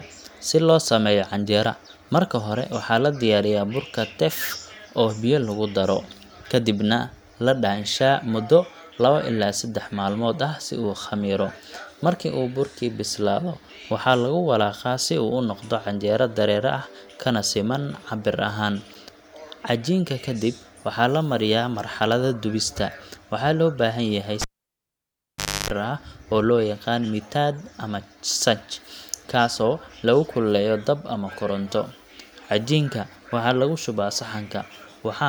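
At 24.42 s the cable is pulled and plugged in again. A pop cuts the speech to near silence for about 1.23 s. While only the tip touches, a 0.29 s burst of 50 Hz mains buzz sounds. A second pop brings the speech back at 25.70 s.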